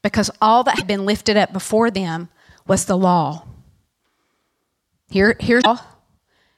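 Damaged data in the compressed stream throws the decoder out of sync twice, at 0.75 to 0.83 s, between "because all that" and "been lifted up before", and at 5.58 to 5.66 s. Each time it misreads the corrupt frames and hunts for the next header, producing a brief chirp, squawk, click or short hole.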